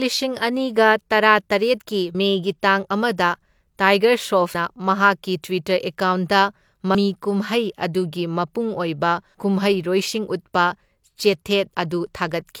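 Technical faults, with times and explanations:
2.15, 4.55, 6.95 and 11.75 s, audio missing between chunks: about a tenth of a second skips with no silence. This is likely lost while 2.5 s chunks are swapped. Spectrograms show abruptly broken harmonics; waveforms show a gapless jump.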